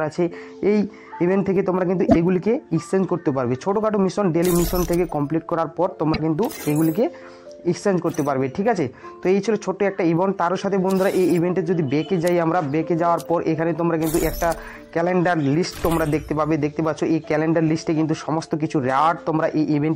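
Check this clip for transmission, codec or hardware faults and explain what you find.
Two faults of one kind turn up, both from damaged data in a compressed stream. From 2.05 to 2.16 s and again from 6.10 to 6.20 s, the audio briefly breaks up for roughly a tenth of a second each time before carrying on. The cause is corrupted bytes in the encoded file or stream: the decoder cannot make sense of the frames there, loses its place, and has to hunt for the next valid frame header before playback resumes cleanly.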